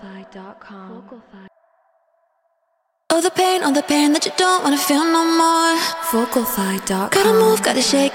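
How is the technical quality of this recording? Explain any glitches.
A single glitch stands out. Bit error spike at 3.80 s: one sample has a bit flipped in memory or on a digital link, so its value jumps by a power of two to about -18 dBFS and snaps straight back. It sounds like one sharp, broadband tick unrelated to the surrounding audio.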